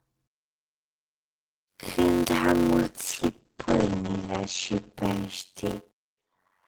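Throughout, a block size mismatch (padded) inserts short zero gaps into every block. This causes a steady buzz at 91.9 Hz, which fits 256-sample written blocks. The speech runs at 0.533 times normal speed, at roughly normal pitch.

From 2.83 s, just after "când a", until 5.77 s, a call bitrate drop makes the speech rough and muffled. The highs are cut from 20 kHz to 8 kHz. The sound suggests a fall from about 32 to 9 kbps, with the worst stretch lasting 1.62 s.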